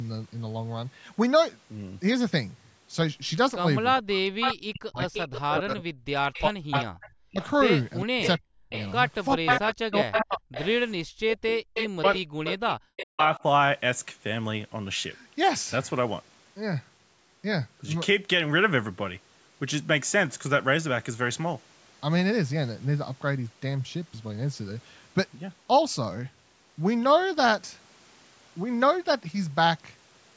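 From 3.98 to 12.05 s, speech suppressed in double talk, likely from the echo canceller mistaking the talker for loudspeaker echo while both sides spoke, turns the voice down for about four seconds in total, dropping as far as about 40 dB. Overlapping this, from 4.41 to 10.67 s, an echo leak, likely from a loudspeaker-side canceller failing to remove its own pickup, returns a copy of the voice 410 ms late at about 5 dB below the speech. A second echo leak from 11.74 to 13.43 s, at the same 410 ms delay, is weaker at about 10 dB down. Within it, from 12.33 to 12.38 s, the background is gated by the echo canceller clamping the microphone, so the room sound briefly drops out by about 36 dB. From 13.05 to 13.21 s, a short burst of speech suppressed in double talk, again likely from the canceller, pulls the voice down by about 40 dB. Throughout, the call microphone processing leaves nothing above 8 kHz.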